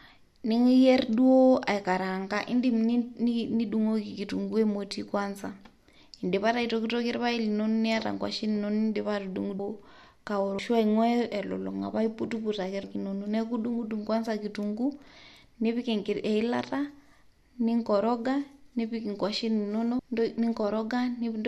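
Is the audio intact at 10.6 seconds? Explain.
No. At 10.58 s the speech jumps ahead with a brief smeared blip, because compressed frames were skipped: about twenty 26.1 ms frames, roughly half a second of audio, never played.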